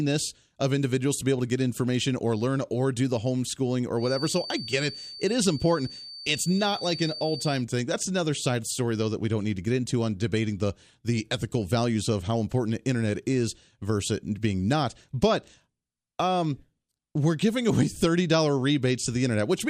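From 3.94 to 7.66 s, after "or do the homeschooling", a feedback whistle at 4.6 kHz sits well below the speech. Likely a speaker-to-microphone loop near feedback point.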